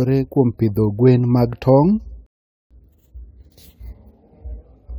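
A speech recording with a rebuffering stall from 2.26 s to 2.71 s: playback stops into silence for about 0.44 s, then picks up exactly where it left off, because the player had run out of downloaded audio and waited for more to arrive. What separates it from a dropout or packet loss is that no sound is missing. The speech on either side joins seamlessly, and the gap only adds time to the clip.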